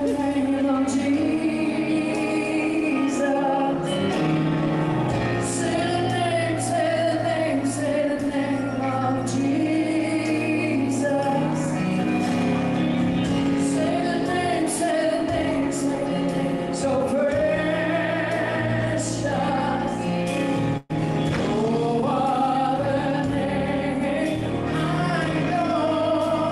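At 20.77 s the audio freezes into a stretched, fading continuation of the last sound for about 120 ms, then resumes at 20.91 s with that stretch of material gone. This is a burst of packet loss on the Opus call path, whose top end stops near 12 kHz: the receiver concealed the missing packets by extending and attenuating what it last had.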